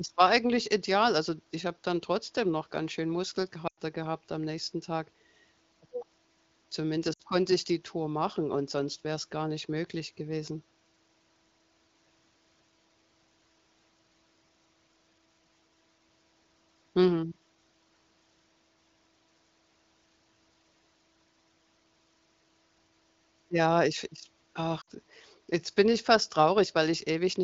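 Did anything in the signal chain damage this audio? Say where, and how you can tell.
Yes. Lost AMR speech frames: bit errors on the radio link corrupted frames, and the AMR-WB decoder concealed the gaps by repeating its last good pitch and vocal tract settings at falling gain. You hear a drop to near silence at 3.67–3.79 s, between "trotzdem noch ganz schön" and "gehabt am nächsten" (100 ms, about five 20 ms frames), then 60 ms dropouts at 7.13 s before "konnte ich die" and 24.81 s between "ich ich" and "jetzt bin ich fast", each returning briefly thin.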